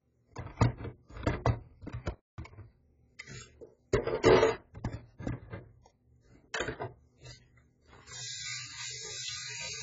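From start to end, everything is dull and smeared, with nothing above 7.6 kHz and a warbling texture, likely heavy AAC compression at a very low bitrate, near 12 kbps.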